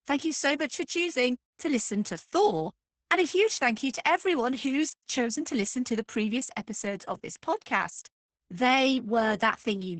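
Throughout, Opus voice compression removes everything above 8.8 kHz. Unlike a plain low-pass, coarsely coded excitation makes the speech hoarse and faintly robotic, fitting about 10 kbps.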